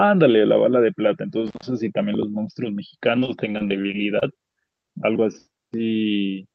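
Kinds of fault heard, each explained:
Intermittent contact: A momentarily open connection cuts the audio for about 124 ms between 1.47 and 1.66 s, with crackle at both edges.
Repeated packet loss (robotic sound): From 3.19 to 4.24 s, short holes up to 24 ms are bridged by extending prior sound, giving choppy speech with pieces missing.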